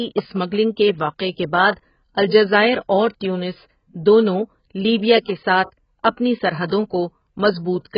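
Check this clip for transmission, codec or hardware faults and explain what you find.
One codec fault runs the whole length of the speech: AAC compression, likely from AAC-LC at a very low bitrate, consistent with about 12 kbps. Nothing remains above 5.2 kHz, and the starved quantiser leaves holes in the spectrum, so sibilants sound dull and smeared, with a warbling, fizzy texture.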